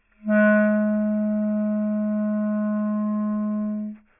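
Throughout the clip, the brighter parts of the sound have a gritty, metallic edge, with faint tones at pitches that don't belong to the source. The spectrum stops abruptly at about 3 kHz, and energy runs right up to that edge. This is aliasing. The audio was reduced to a much lower sample rate, consistent with about 6 kHz, without first filtering out content above 3 kHz. That high-frequency content folded back into the band as unrelated frequencies, sitting roughly 30 dB below the wanted sound.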